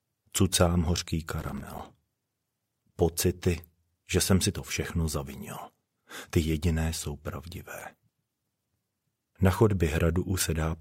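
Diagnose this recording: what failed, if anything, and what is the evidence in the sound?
The driver and buffer stage failed: the processor could not fill its audio buffers on deadline, so processor overload crackle appears in two bursts, from 1.30 to 1.83 s and again from 7.80 to 7.94 s. Each missed deadline drops in a short hole of silence with hard edges, and the length of each hole points to buffers of about 5 ms. The first, longer burst is a dense run of gaps heard as gritty tearing; the second is a brief cluster.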